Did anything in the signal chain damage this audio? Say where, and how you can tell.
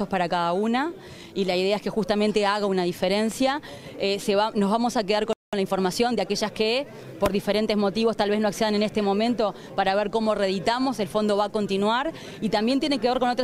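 Yes. A playback stall at 5.33 s cuts the sound to silence for 198 ms, most likely because the player's buffer ran dry or its output thread was blocked.

Time-compressed catch-up runs from 5.53 to 6.31 s. The player drains its backlog by splicing out and cross-fading small slices, so the audio plays at 1.25x speed at normal pitch.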